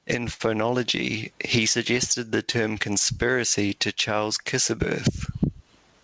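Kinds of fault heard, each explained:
Gain pumping: Quiet and loud passages sit unnaturally close in level and the whole recording sounds squashed and breathing. The likely cause is input gain set far too high for the microphone, with a fast limiter or compressor hauling the level back down by around 20 dB on each loud syllable and releasing it in the gaps.
Short stall from a late packet: Between 0.34 and 0.42 s, one sound is held slightly too long, with a slight buzz or dip, before the speech carries on from exactly where it stopped. A packet arrived late and the jitter buffer ran dry, so the receiver stretched the last audio by about 58 ms to cover the wait. Nothing is lost from the speech, but playback ends up running that much later afterwards.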